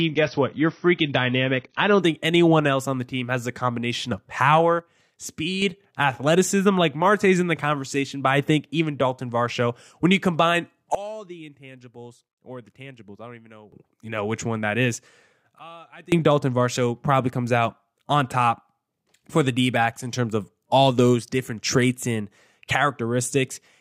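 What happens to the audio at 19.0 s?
Nothing goes wrong at 19.0 s; the speech plays through that moment intact, with no dropout, click or distortion.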